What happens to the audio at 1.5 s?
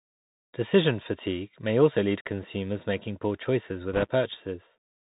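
At 1.5 s, like the whole clip, the speech goes through a Bluetooth CVSD headset codec, one-bit up/down steps with nothing above 4 kHz passing, so it's muffled, scratchy on s sounds, with granular hiss.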